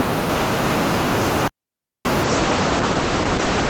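At 1.48 s the speech drops into a digital wireless dropout: the receiver lost too much data and muted with a very short fade, leaving a clean hole of near silence until 2.05 s, about 0.57 s, with no noise burst on either side.

From 2.24 s to the end, a call bitrate drop makes the speech rough and muffled. The bandwidth estimate fell, so the encoder coded more coarsely, at a rate consistent with roughly 9 kbps after about 32 kbps. The top end falls from 20 kHz to 8 kHz, staying at its worst for about 1.38 s.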